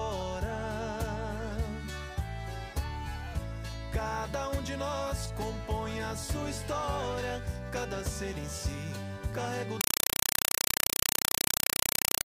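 Compressed stream played as audio from 9.81 s to the end at 12.25 s: the sound gives way to loud, chattering static, 4 ms noise bursts repeating 31.25 times a second with silence between. That pattern fits an undecoded AC-3 stream, around 192 kbps, read as ordinary samples.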